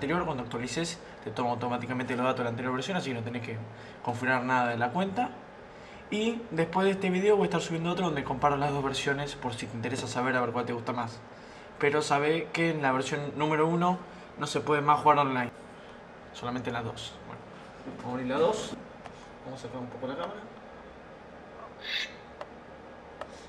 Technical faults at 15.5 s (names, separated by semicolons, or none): damaged data in a compressed stream